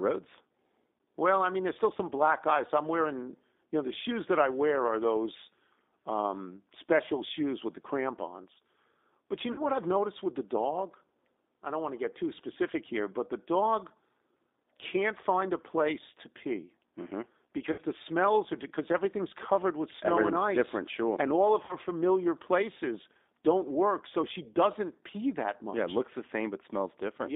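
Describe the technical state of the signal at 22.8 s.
At 22.8 s the speech is passing through a G.729 codec, as it does for the whole clip. It is rebuilt from a vocal-tract filter, pitch prediction and sparse pulses at what sounds like 8 kbit/s, so it comes out band-limited to about 250 Hz to 3.7 kHz, plainly rough and synthetic.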